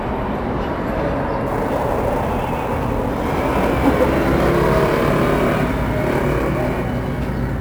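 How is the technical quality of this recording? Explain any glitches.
The recording has one clear fault. From 1.47 s to the end, sample clock jitter adds a gritty hiss. The converter's clock wanders by something on the order of ten microseconds, so each sample is taken slightly early or late. Wherever the waveform changes quickly, that timing error becomes an amplitude error, roughly 25 dB below the signal. Unlike a steady noise floor, this roughness swells on loud, bright passages and disappears completely in quiet gaps.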